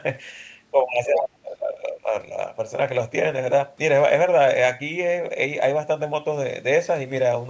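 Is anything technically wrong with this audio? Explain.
Yes, there are two faults.

Between 1.06 and 2.14 s the speech is suppressed in double talk. For about a second the voice sinks, at its deepest by roughly 30 dB. The likely cause is an echo canceller that heard both ends talking at once, could not separate the local talker from the loudspeaker echo, and turned everything down. A network dropout would leave clean silence or glitches. Here the level ducks while someone else is talking.

From 1.14 to 1.18 s, inside that dip, a brief scrap of the other side's voice leaks through at a level only slightly below the speech. This is likely the far-end voice coming out of the device's loudspeaker and reaching the microphone without being fully cancelled. It differs from room reverb or a repeated echo of the talker because it is a different voice, short, and not a delayed copy of the main speech.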